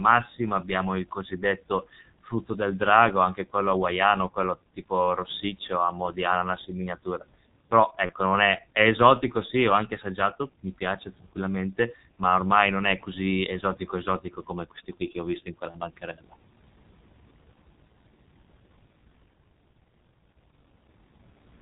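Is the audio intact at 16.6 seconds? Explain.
No. At 16.6 seconds the speech sounds muffled and hoarse with smeared consonants, as it does throughout, from G.723.1 codec coding at 6.3 kbit/s, which discards everything above 4 kHz.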